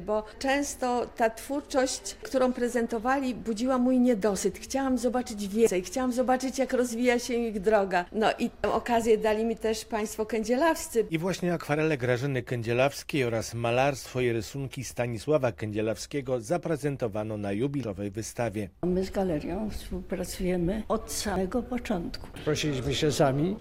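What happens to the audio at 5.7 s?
At 5.67 s the sound jumps ahead, skipping about a fifth of a second. That's likely a dropped buffer (overrun), with the lost chunk's edges spliced straight together.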